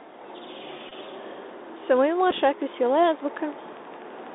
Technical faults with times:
0.00-4.35 Bluetooth CVSD headset codec
0.89-0.93 Bluetooth headset packet repeated
2.20-4.28 train of clicks
2.31 Bluetooth headset packet repeated

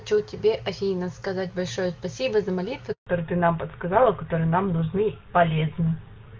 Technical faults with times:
2.92-3.06 handover gap
3.06-6.39 fallback to narrowband

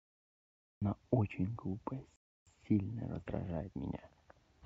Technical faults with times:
0.00-0.82 cut-off start
2.16-2.47 rebuffering stall

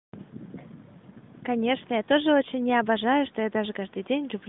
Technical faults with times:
none

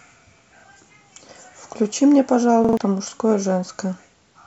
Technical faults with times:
0.60-0.64 repeated buffer
2.65-2.77 repeated buffer

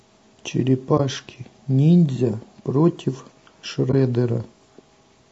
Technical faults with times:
0.00-5.32 low-delay AAC compression
0.97-1.00 AAC frame loss with muting
3.91-3.94 AAC frame loss with muting

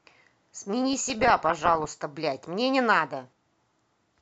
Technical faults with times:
0.93-1.87 DAB burbling

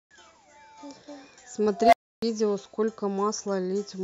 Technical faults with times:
1.75-2.22 unstable filter

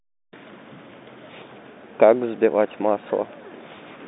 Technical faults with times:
none

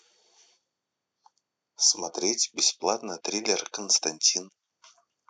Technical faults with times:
none

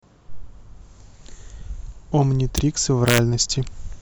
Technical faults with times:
2.58 integer overflow
3.08-3.18 integer overflow

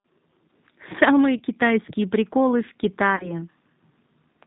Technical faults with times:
0.00-4.46 G.729 codec
1.37-1.40 VoIP packet loss concealed by the speech codec
3.16-3.33 VoIP packet loss concealed by the speech codec

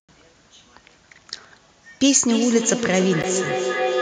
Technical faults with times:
2.01-4.01 feedback echo between two devices
3.22 block of digital silence

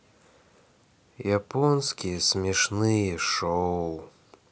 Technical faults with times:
none

